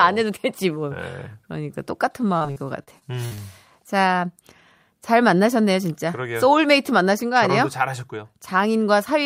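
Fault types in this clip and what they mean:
Repeated packet loss (robotic sound): six gaps up to 59 ms between 2.37 and 3.39 s, patched by extending preceding audio, leaving choppy speech with pieces missing.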